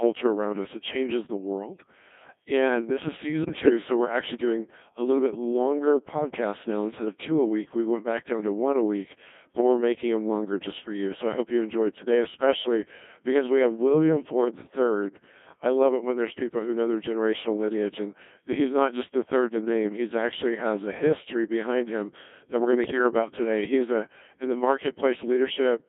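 From start to finish the speech runs through a Codec 2 vocoder. The decoder does not keep the waveform. It rebuilds the voice from pitch, voicing, energy and a spectral envelope, using sine-wave synthesis. Damage here is heavy. The voice sounds robotic and buzzy throughout. The sound is confined to a line band of 200 Hz to 3.6 kHz. Its coarse, smeared texture fits the 1.6 kbit/s mode.

Hard clipping is also present throughout. The signal is driven about 3 dB past what one stage can pass, so the loudest peaks are sliced flat. Only a small share of samples goes over. The flat tops add high harmonics. The result is a brief crackle on the strongest peaks, not a constant fuzz.

At 3.42 s, just after "this is", bit errors on digital voice radio strike until 3.70 s. Flipped bits reach the low-rate vocoder. Each bit steers the pitch, level, voicing or spectrum of a whole frame. The error rate is high, several percent. 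The synthetic voice lurches in pitch and level and breaks into warbling, robotic gibberish. It sounds like several consecutive frames were corrupted.

A second, shorter burst of bit errors runs from 22.84 to 22.99 s. It sits between "that we're going to" and "about today". The error rate is a little lower, around five percent. The voice bleeps and jumps in tone colour for a moment. It then settles back into the steady vocoder buzz. The length fits about three damaged frames.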